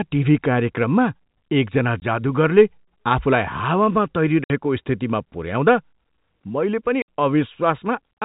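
The speech drops into dead silence three times: at 2.00 to 2.02 s, at 4.44 to 4.50 s right after "आफूलाई हावामा", and at 7.02 to 7.06 s just after "मैले पनि". This is packet loss filled with silence. Packets never arrived, and the receiver played nothing in their place. The first hole fits a single 20 ms packet and the longer ones fit about three, all over a G.711 telephone line that passes nothing above 4 kHz.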